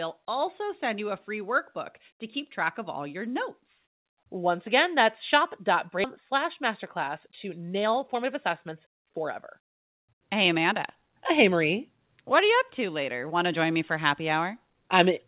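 Skip ahead at 6.04 s in this speech recording: about a second of audio never reaches the listener, and playback jumps straight to later material with no gap or fill. That stretch was dropped, either on the way or by the jitter buffer when it overflowed, cutting the delay by about the same amount and joining the two sides of the missing stretch almost directly. A jitter buffer speed-up follows from 6.32 to 11.50 s. The receiver repeatedly removes short pieces one or a few pitch periods long, trimming roughly 0.4 s in total. Delivery runs at about 107% of normal speed while the pitch stays the same, so the speech sounds slightly hurried across that span. Throughout the clip, the call path's band limit is audible, with nothing above 4 kHz, which fits narrowband G.711 mu-law coding at 64 kbps.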